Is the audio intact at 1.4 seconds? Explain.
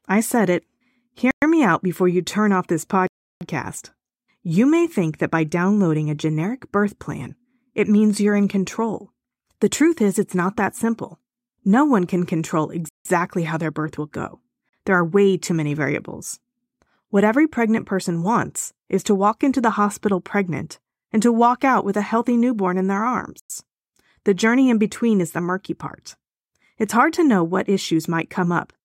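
No. At 1.4 seconds the speech is in a gap: it drops to dead silence from 1.31 s to 1.42 s, a hole of about 0.11 s, then resumes on "me out before you". This is most likely a Bluetooth stall, where radio interference held back packets long enough for the headphones' small buffer to empty, so playback froze until the resent data arrived and the speech picked up again.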